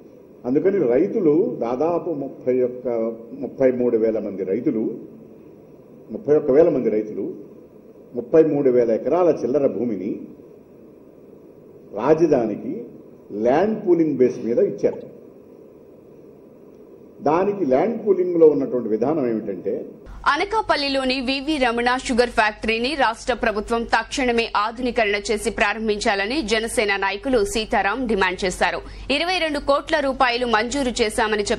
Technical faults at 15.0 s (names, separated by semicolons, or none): MP3 compression; corrupt frame decoded